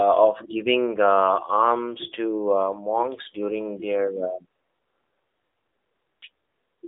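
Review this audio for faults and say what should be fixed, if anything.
The whole clip runs through an AMR narrowband mobile codec: nothing above 3.8 kHz, and the speech sounds buzzy and synthetic, which fits a low bitrate around 7.4 kbps. To prevent it, record or route the call over a wideband path.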